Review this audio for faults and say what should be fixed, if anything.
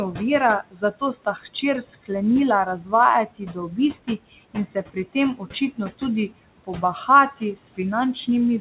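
Noise suppressor artifacts run through the whole clip. The suppressor cuts the steady room noise, which sits about 17 dB below the speech, by about 18 dB frame by frame. The background sinks in the pauses and rises again under the speech. Using a milder suppression depth, or reducing room noise at the microphone, would prevent this.

Speech cut by the noise suppressor occurs at 0.71–0.83 s, 1.25–1.63 s, 2.79–2.93 s and 3.27–3.78 s, with drops of about 16, 12, 9 and 14 dB. The suppressor took quiet speech energy for noise and turned it down with the background, so a tenth of a second or more in each span sounds swallowed or faint. A gentler suppressor with better speech-presence detection would stop it from removing soft speech.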